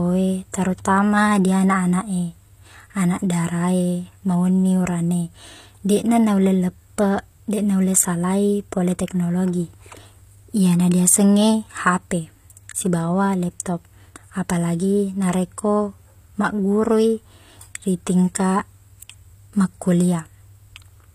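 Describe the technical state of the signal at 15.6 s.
HE-AAC compression is audible at 15.6 s, as it is across the whole clip, and the likely cause is an HE-AAC v2 encode at a low bitrate, consistent with about 24 kbps. The codec keeps only the lower spectrum and fills the treble by copying lower bands upward under a coarse envelope. The upper harmonics therefore fail to align with the real ones. Sibilants in the speech come out gritty and plainly metallic, and nothing remains above 15.5 kHz.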